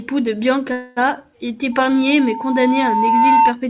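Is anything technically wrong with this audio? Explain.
Yes, there are two faults in this speech, which comes through a narrowband call path with nothing above 4 kHz.

From 0.72 to 0.98 s the sound stalls and the last moment is stretched into a fading buzz for about 244 ms before speech resumes with nothing lost. This is likely a call audio freeze: delayed packets emptied the jitter buffer, so the receiver filled the wait.

From 1.72 to 3.56 s a steady 900 Hz tone swells over roughly 1.5 s into a squeal about 5 dB above the speech. This is loudspeaker feedback squeal: the microphone hears its own loudspeaker, and at 900 Hz the loop gain exceeds one.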